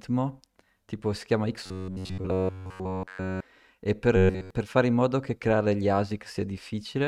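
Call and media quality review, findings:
Robotic sound from repeated short buffers, 1.66–3.41 s after "tipo si chiama" and 4.16–4.51 s before "per fare in modo". Rigid metallic buzz near 94 Hz, fully repeated. Likely receive-side buffer underrun: about 10.7 ms chunk looped, fresh audio skipped.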